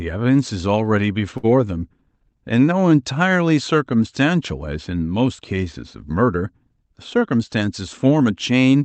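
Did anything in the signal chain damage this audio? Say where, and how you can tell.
Yes. At the network and jitter-buffer stage of the call path, a packet arrived late around 1.37 to 1.46 s and the buffer ran dry. The receiver filled the gap with about 61 ms of stretched sound from the last good audio, then carried on from where it stopped, so no speech is lost. You hear a sound held unnaturally long with a faint buzz or dip, and everything after it sits 61 ms later.

The same buffer caused a jitter buffer speed-up from 6.97 to 7.62 s. Having built up more audio than its target, it shed the excess by cutting out short pitch-period segments in quick succession, around 70 ms in total. The speech plays at about 109% speed with its pitch unchanged, so that stretch sounds rushed. The Opus codec, running at 32 kbps with an 8 kHz bandwidth, limits the top end throughout.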